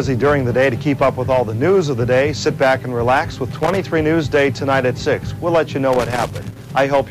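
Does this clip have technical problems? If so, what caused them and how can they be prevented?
Yes. Two bursts of loose connector crackle occur, from 3.51 to 3.77 s and from 5.93 to 6.71 s, the second lasting nearly 0.8 s. Each is an irregular scratching crackle: a worn or dirty contact in the signal path repeatedly opens and closes as it shifts, chopping the audio, and any DC present on the line turns each break into a pop. Prevention: clean or replace the connector and cable, and secure it against movement.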